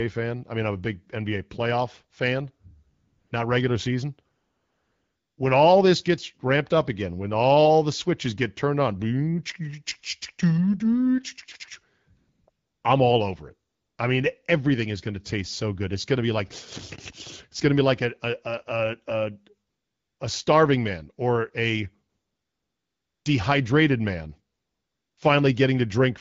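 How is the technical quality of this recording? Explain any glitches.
The recording has repeated AMR comfort noise in its pauses, carried over a wideband phone link whose light coding damage fits AMR-WB at about 12.65 kbit/s.

AMR comfort noise appears at 2.93–3.31 s (after "playoff fan", before "not regular season"), 4.35–5.37 s, 12.17–12.47 s, 12.49–12.83 s, 13.69–13.97 s (after "I'm all over it", before "I mean everything is"), 19.67–20.19 s, 22.09–23.25 s and 24.55–25.17 s (after "dehydrated man"). Each time the phone treated the talker as silent and stopped sending speech frames. The receiver then synthesised a smooth, steady hiss in place of the real background, so the room sound drops out and switches back. On a spectrogram these gaps are flat, featureless noise bands with hard edges. On a waveform they are uniform low-level fill.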